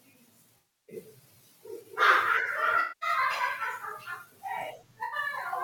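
Three spots of AAC frame loss with concealment show up in this speech: 0.58 to 0.96 s, 2.80 to 3.09 s, and a short one at 5.04 to 5.16 s. Each time the decoder lost frames and filled the gap by reusing the last good spectrum with scrambled phase, so you get a smeared, noisy, phasey patch instead of clean speech. The gap lengths fit runs of roughly 21 ms AAC frames.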